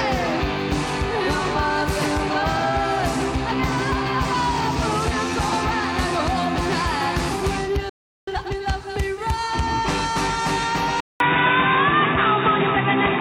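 At 7.89 s the audio cuts to silence for about 0.38 s, resuming at 8.28 s. This is a playback stall: the gap is abrupt rather than faded, and then the sound carries on. The cause is likely the player running short of buffered data, or its output thread being blocked, so nothing reached the output until the pipeline recovered.

From 8.28 s to 8.64 s comes a time-compressed catch-up. The player works off the backlog left by the stall by cutting out small segments and cross-fading the remainder, running the material at twice normal speed while keeping the original pitch. The result is a brief, hurried passage before normal pacing returns.

At 11.00 s the input is switched to a poorer device, likely a different microphone or a headset's call profile taking over the recording. There is a silence of about 200 ms at the changeover. After it, the sound is dull and boxy, with a narrower band. The level shifts by a few decibels, and a new noise floor sits roughly 30 dB below the signal. 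This degraded character persists to the end of the clip.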